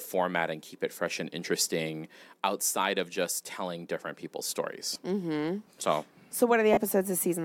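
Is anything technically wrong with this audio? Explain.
Yes, there are two brief dropouts from lost LE Audio frames. The first comes at 4.94 s, right after "just telling different people's", and lasts about 15 ms, which fits two 7.5 ms frames. The second runs from 6.73 to 6.78 s, about 37.5 ms, consistent with five frames. The LC3 decoder filled each gap by repeating the last good spectrum with randomised signs, so the voiced speech turns into a short noisy smear, and in the longer gap it fades toward silence. On a spectrogram, the harmonic striations give way to a diffuse, blurred band, and in the waveform the periodic cycles become irregular, shrinking in amplitude in the second gap.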